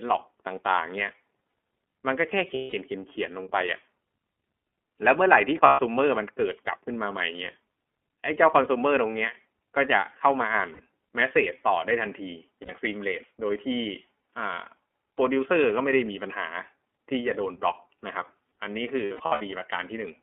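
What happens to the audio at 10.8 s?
At 10.73 to 10.80 s, just before 10.8 s, there are lost iLBC frames. Packets dropped, and the decoder filled the hole by repeating the last pitch cycle blended with noise. The result is a brief held, slightly buzzy or breathy vowel lasting about 60 ms, which fits two lost 30 ms frames. On a waveform it shows as a short run of near-identical repeating cycles. On a spectrogram it appears as steady, smeared harmonic bands with a noisy haze. Because each iLBC frame is decoded independently, normal speech resumes almost immediately after 10.80 s.

The same moment also carries the iLBC codec, which runs through the whole clip at 13.33 kbps. Its plainly audible damage gives the sound a rough, slightly synthetic texture. Its narrowband line of roughly 250 Hz to 3.4 kHz means a spectrogram shows nothing above 4 kHz and little energy at the very bottom. The waveform looks slightly coarsened rather than cleanly detailed.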